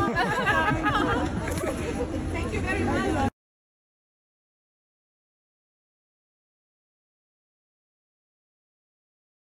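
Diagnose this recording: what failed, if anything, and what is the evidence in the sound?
The converter stage failed, with sample clock jitter from the start to 6.68 s. Through that span a hiss or roughness rides on the sound, rising with louder and higher-frequency content and dropping away in the quiet moments. After 6.68 s it is gone. An unstable clock takes each sample slightly early or late at random, by around 2 microseconds, so the error tracks the waveform's slope and sits roughly 35 dB below the signal.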